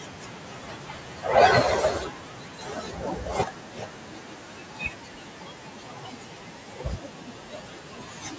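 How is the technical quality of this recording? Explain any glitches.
The recording has two kinds of fault, both from the noise suppressor in the call's microphone processing.

Speech cut by the noise suppressor runs from 0.00 to 1.26 s and from 1.94 s to the end. The suppressor mistakes quiet parts of the speech for noise. It turns them down by up to about 12 dB. Soft consonants and word endings sound swallowed or faint.

Noise suppressor catching up happens from 5.71 to 6.36 s. The room noise jumps by about 11 dB around 5.5 s. The suppressor's noise estimate lags behind. The noise comes through louder at first, then sinks by about 8 dB over 650 ms as the estimate adapts.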